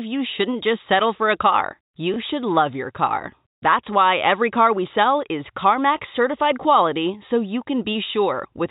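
A small blip breaks into this speech clip from 2.14 to 2.16 s. It comes from packet loss with the last packet repeated: one 20 ms stretch went missing, and the receiver replayed the previous packet to fill the gap. The telephone band limit at 4 kHz is consistent with G.711 telephone coding.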